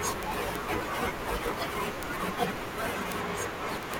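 From 0.12 s to the end at 3.99 s, the speech carries word clock ticks. They are sharp clicks at a steady rate, around twenty per second, and uneven in strength. The receiving device runs on its own clock, not locked to the sender's digital link. The two clocks differ by a few hundred parts per million. Each time they slide past each other, one sample is dropped or repeated, and a click results.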